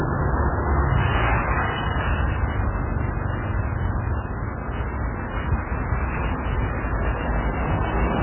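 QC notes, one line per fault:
throughout: MP3 compression. The audio sounds dull and muffled, with nothing above 3 kHz and a heavy watery, swirling texture as faint detail flickers in and out. This is likely a bit-starved MP3 encoder cutting the treble and zeroing weak frequency lines, which fits a bitrate near 8 kbps.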